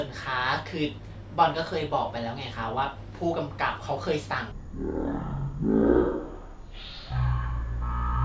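From 4.52 s to the end, the speech drops into a wrong sample rate fault: the samples are being played back at a third of the rate they were captured at, with no conversion, which fits 48 kHz material read out at 16 kHz. Everything slows to 0.333 times speed and falls about 19 semitones, giving a deep, dragging, murky voice. Unlike a pitch shift or time-stretch, tempo and pitch move together by the same ratio.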